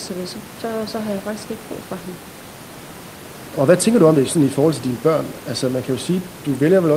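No technical faults can be heard in the speech, and the only other sound is the room's own background noise, sitting about 21 dB below the voice.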